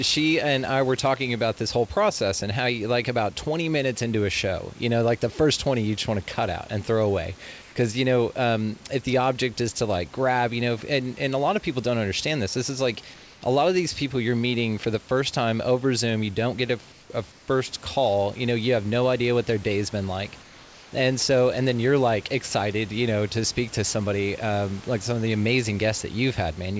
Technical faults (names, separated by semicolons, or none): comfort noise in place of the background